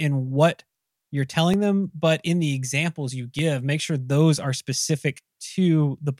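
A speech clip with four sharp single clicks at 1.54, 3.39, 4.39 and 5.52 seconds. Each is likely dropped samples, under a millisecond lost, making the waveform jump.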